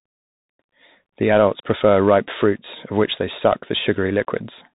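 The speech runs throughout through a Bluetooth CVSD headset codec, which encodes each sample as a single up-or-down bit with an adapting step, consistent with a 64 kbps link. Nothing above 3.8 kHz survives, so the sound is muffled and narrow, with scratchy s sounds and a grainy hiss underneath.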